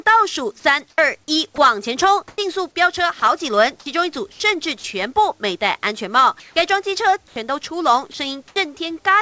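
From 0.60 to 2.38 s, 3.20 to 4.84 s and 6.40 to 8.56 s, the sound is chopped by the voice detector, likely switching transmission on and off. In total about 240, 200 and 340 ms are replaced by comfort noise, heard as choppy dropouts with hiss underneath. On a spectrogram these gaps look like smooth, featureless noise, and on the waveform they appear as low, flat plateaus. Everywhere in the clip the spectrum stops at 8 kHz, which fits G.722 at 64 kbps.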